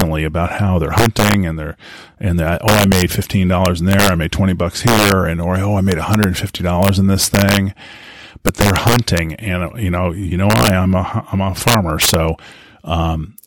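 Throughout the speech, a gain or summing stage is pushed about 7 dB past its integer range, and instead of being limited, the values wrap around to the opposite sign. This is integer overflow. Only a small fraction of samples, around half a percent, cross the limit, but each one jumps across the full scale. The result is harsh, violent cracks on the loudest syllables, far sharper and more abrupt than ordinary clipping would sound.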